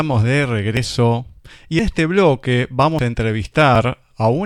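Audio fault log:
0.77, 1.79 (just before "este bloque"), 2.99 (just after "este bloque") and 3.76 s: dropped buffer (overrun). Samples were likely overwritten before being read, so at each spot the speech jumps ahead about a tenth of a second.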